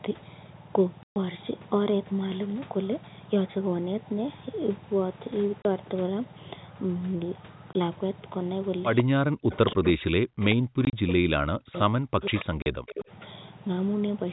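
Packets went missing at 1.03 to 1.16 s, 5.62 s, 7.73 s, 10.85 to 10.93 s and 12.62 s, and the receiver inserted silence for each. The holes of 130, 30, 20, 50 and 40 ms, the 50 ms one broken into short runs, fit a 10 ms packet size, and they have hard edges.

From 8.97 s an echo leak appears, likely from a loudspeaker whose echo canceller let part of its pickup return. A copy delayed by 141 ms, about 15 to 25 dB below the speech, is heard at 8.97 s, 9.54 to 9.88 s, 11.73 s, 12.22 to 12.45 s and 12.88 s.

From 9.03 to 11.75 s and again from 11.98 to 13.11 s, speech is suppressed in double talk, likely because the canceller could not separate the talker from the returning echo and turned both down. The speech sinks by up to about 40 dB in pieces, about three seconds in all.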